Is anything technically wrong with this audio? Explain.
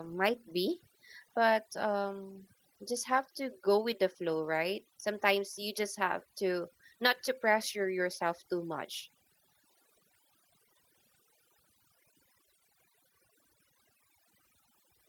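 Yes. Throughout the speech the background drops away, dotted with twinkling specks, and the voice loses its quieter details as they fade out. This is overdone noise removal: a noise reduction stage set far too aggressively pulls individual frequency bands down or off whenever they sit close to its noise estimate, so residual noise breaks into isolated chirps while the softer parts of the voice are removed with it. The light Opus voice coding on top adds little of its own.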